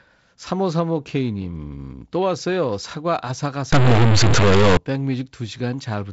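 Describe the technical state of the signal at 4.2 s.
At 4.2 s the signal sits inside a stretch from about 3.72 to 4.77 s where a data bit is likely stuck at a fixed value, as from a broken line or converter. Roughly half the samples come out shifted by that bit's weight, following the waveform. Quiet moments fill with noise, carried on top of the G.722 wideband coding at 48 kbit/s, which has no content above 7.7 kHz.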